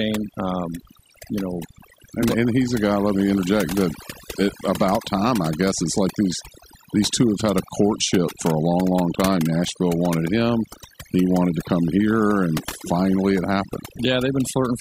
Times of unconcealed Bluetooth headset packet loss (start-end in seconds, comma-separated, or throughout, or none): none